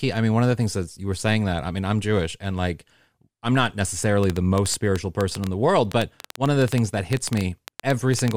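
Likely interference from nearby equipment or a faulty connection is injecting repeated pulses into this speech recording. From 4.24 s to 8.32 s a train of clicks, around forty of them at about 8.3 per second and unevenly spaced, ticks sharply well above the speech level, in pauses too.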